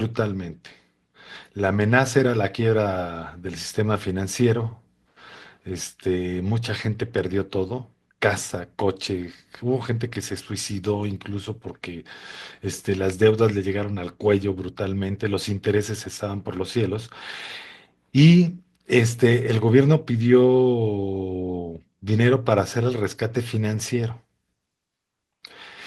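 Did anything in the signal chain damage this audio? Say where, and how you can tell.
Yes. The damage sits at the network stage, with the codec's recovery covering it: a lost packet rebuilt from error correction at 9.91 to 9.97 s. The speech doesn't drop out, but for about 40 ms it turns rougher and grainier. That points to two missing packets whose content the decoder replaced with the low-bitrate redundant copies carried in the following packets. Those copies keep continuity but lose detail, so the patch sounds coarse rather than silent.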